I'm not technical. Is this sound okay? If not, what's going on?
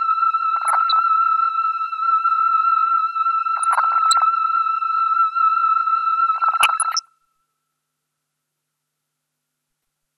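No. Throughout, the sound is dull and muffled, with a grainy, gurgling edge that is clearly audible. This is likely MP2 compression: the audio was squeezed too hard, so the highest sounds get switched off and what's left is stored roughly.

On top of that, there are four short bursts of blippy, gurgling noise, at about 0.56 to 0.99 s, 3.57 to 4.22 s, 6.36 to 7.09 s and 9.82 to 9.96 s. This is DAB burbling: a weak digital radio signal let errors slip into the audio data.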